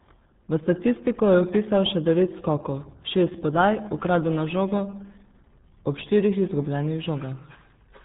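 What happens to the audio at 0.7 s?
At 0.7 s, like everywhere in the speech, you're hearing the RealAudio 14.4 codec: nothing above 3.8 kHz survives, and the heavy coding leaves it muffled and gargly, consistent with a roughly 8 kbit/s stream.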